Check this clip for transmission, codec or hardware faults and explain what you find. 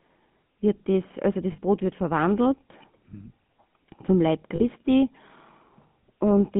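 Two faults are audible: GSM full-rate coding across the whole recording, and two brief losses of GSM frames.

GSM full-rate codec, throughout: the speech is confined to roughly 150 Hz to 3.4 kHz, and the coarse pulse-driven vocal-tract model at what sounds like 13 kbit/s adds a buzzy, gravelly roughness. A spectrogram shows sharp band edges and smeared harmonics.

Lost GSM frames at 1.52–1.59 s (60 ms, between "wird das also" and "wird verwandelt mhm") and 4.56–4.64 s (40 ms): the decoder repeated the last good frame's parameters, giving a short metallic ring. A spectrogram shows frozen, repeating bands, and the waveform shows a periodic stretch.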